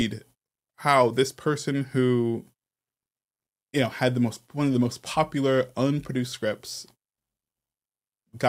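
No technical faults are audible anywhere in the speech recording.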